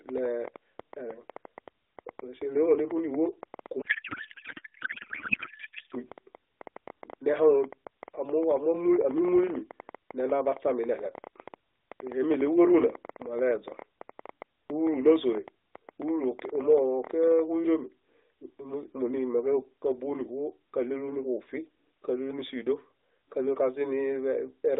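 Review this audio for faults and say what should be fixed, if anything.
A train of clicks runs from 0.09 s to 17.4 s: roughly 150 similar pulses at about 9.1 per second on average, spaced irregularly, with peaks about 5 dB above the speech. They tick through the pauses as well as under the talking, so they were added on top of the signal rather than coming from it. The likely source is electrical interference from nearby equipment or a faulty connection or power supply. To prevent it, reroute or shield the cabling, move away from the interfering equipment, and check the interface's driver and buffer settings.

A codec payload misread occupies 3.82 s to 5.95 s. For those two seconds the speech is replaced by garbled noise and warble that barely tracks the talker's rhythm. The decoder is reading valid-looking AMR frames with their fields shifted. That fits octet-aligned AMR-NB payloads being parsed as bandwidth-efficient, so every codec parameter lands in the wrong slot. 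Once the framing agrees again, the ordinary narrowband AMR sound returns, band-limited to roughly 300 Hz to 3.7 kHz with light codec coloration. To prevent it, make sure both endpoints negotiate and enforce the same octet-align setting in the session description.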